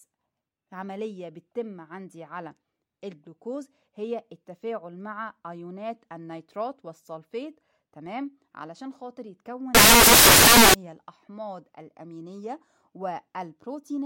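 From 9.75 to 10.74 s the speech turns into loud, harsh broadband noise: samples built from the wrong bytes, with fast-changing low bits read as the large part.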